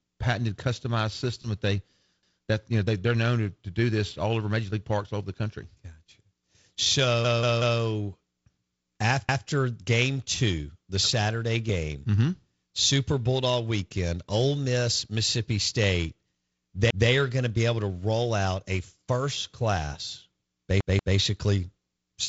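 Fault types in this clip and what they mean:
Repeated buffer: the speech stutters five times, each time a chunk of about 186 ms playing again with a hard join. This happens at 2.23 s just after "customized system that they", at 7.25 s where the chunk sounds three extra times, at 9.29 s, at 16.90 s, and at 20.81 s after "out a first class", where it repeats twice. New audio arrived late, so the device replayed its last block, which fits an 8192-sample buffer.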